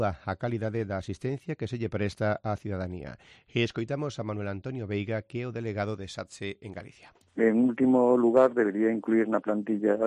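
No technical faults can be heard anywhere in it.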